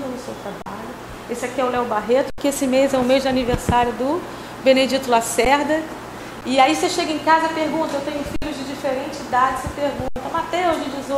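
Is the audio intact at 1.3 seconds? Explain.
Yes, the audio at 1.3 seconds is intact, with no dropout, click, distortion or other fault present at that moment.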